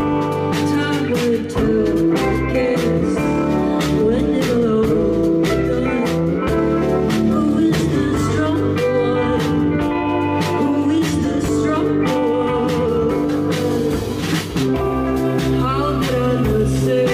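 At 2.98 s a brief disturbance runs to about 3.02 s, roughly 36 ms, which fits a single damaged AAC frame. This is a corrupt frame concealed: flipped bits made the frame undecodable, the decoder caught the error, and it filled the slot itself, so timing is almost certainly kept. On a spectrogram, a narrow vertical band of reduced or blurred energy appears, with no broadband spike.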